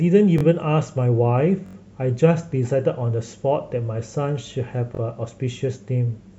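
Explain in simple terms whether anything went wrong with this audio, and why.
The playback device ran short of fresh audio three times and replayed its last chunk instead, a repeated buffer. Each chunk lasts about 21 ms, which fits a 1024-sample buffer. The speech stutters briefly at 0.38 s and 4.95 s (two repeats each) and longer at 1.66–1.75 s (four repeats).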